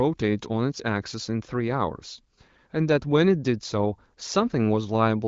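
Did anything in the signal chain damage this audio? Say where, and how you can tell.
No, nothing damaged this audio.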